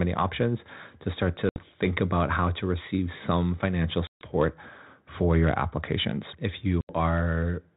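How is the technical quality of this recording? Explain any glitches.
The recording is a telephone-band call with three audible glitches, all packet loss on an ADPCM call. The G.726 coding, which sounds like 32 kbit/s with nothing above 4 kHz, adds only light grain.

The gaps fall at 1.49 s, 4.07 s and 6.81 s. About 70 ms, 140 ms and 80 ms of audio are lost, which fits roughly seven, fifteen and seven packets. Each gap is filled with hard-edged silence. Because ADPCM sends only differences from an adaptive prediction, the receiving decoder's predictor and step size lose track of the sender's during the gap. When the speech resumes it comes back with a click, slight distortion or the wrong loudness, then settles within some tens of milliseconds. That brief disturbed recovery is what distinguishes it from a simple mute or gate dropout.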